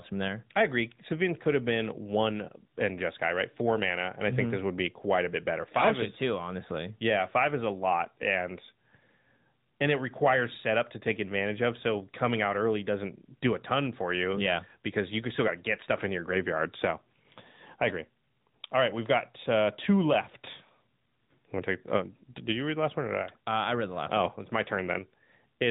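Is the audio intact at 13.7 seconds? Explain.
No. At 13.7 s the speech carries AMR narrowband mobile codec damage, as it does throughout the clip. The codec rebuilds each 20 ms frame from a vocal-tract filter excited by a few pulses. At a mid-range rate, likely around 10.2 kbps, this leaves a plainly buzzy, synthetic edge. On a spectrogram, energy stops sharply near 3.8 kHz with nothing above, and the harmonics look smeared and blocky from frame to frame.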